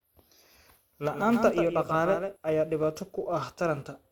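Throughout the speech, a filter restarted on every block adds a steady 375 Hz buzz that follows the speech level, which fits a 128-sample block; a spectrogram shows evenly spaced vertical ticks. From 1.14 s to 2.36 s, a doubled audio track appears abruptly: a full-band copy around 150 ms late and a few decibels quieter, likely from a second, slower capture path. Every onset is visibly duplicated to its right.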